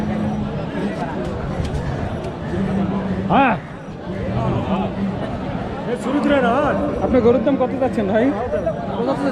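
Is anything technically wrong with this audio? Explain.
No, nothing technically wrong.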